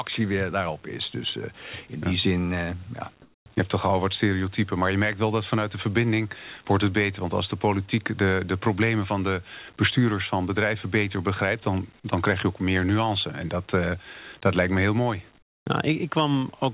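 From 3.22 to 3.46 s and again from 15.38 to 15.66 s, the room background gives way to comfort noise: a steady, featureless hiss where the textured ambience was. In the second pause it also drops about 12 dB, while the first keeps the same level. The likely cause is discontinuous transmission, where the receiver synthesizes noise during speech gaps. Unlike a gate or dropout, the pauses never fall to silence, and the hiss is band-limited to 4 kHz like the rest of the call.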